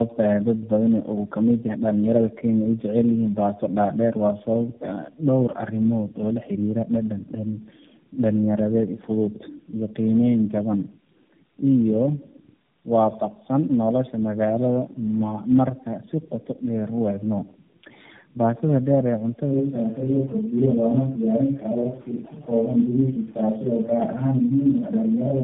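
A speech clip run through tandem speech coding the whole way: three low-rate speech codecs in a row, with nothing above 3.6 kHz, so it's rough, muffled and warbly, likely from iLBC, G.729A and AMR-NB stages.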